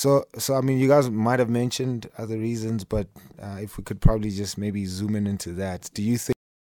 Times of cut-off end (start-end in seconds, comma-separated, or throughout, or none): 6.32-6.74